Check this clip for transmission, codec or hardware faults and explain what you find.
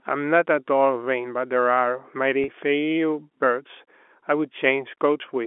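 One transmission fault, on a speech clip carried in a telephone band of roughly 250 Hz to 3.5 kHz. From 2.44 to 2.48 s, packet loss with pitch repetition: about 40 ms of audio, which fits two lost packets, is bridged by repeating the last pitch period, giving a brief held, buzzy tone.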